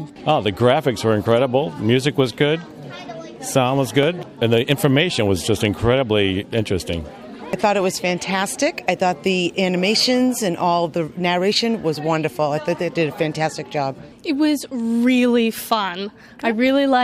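A handful of samples likely went missing from the stream, a fraction of a millisecond's worth, so the waveform jumps straight from one value to a later one. In this audio that dropped-samples gap produces a single sharp click at 4.03 s, too brief to remove any audible sound.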